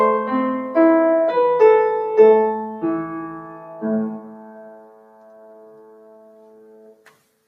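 The level of the sound keeps breathing up and down through the whole clip, with sustained parts sinking and then recovering while sharp onsets punch through. This pumping, thinned character comes from a noise suppressor applied to music or sounds: a processor designed to clean up speech reads steady tones, ambience and decays as background noise and pulls them down, with the gain swinging by roughly 10 dB as it changes its mind about what counts as signal. Two stretches show sound cut by the noise suppressor more heavily than elsewhere. From 3.48 to 3.82 s, a fraction of a second, the held material dips by about 5 dB. Then from 4.26 to 7.06 s the sound sinks again, by as much as about 6 dB, for nearly three seconds. In both places the suppressor has judged a continuing or fading sound to be noise, so its body drops away or its tail is clipped short instead of ringing out naturally.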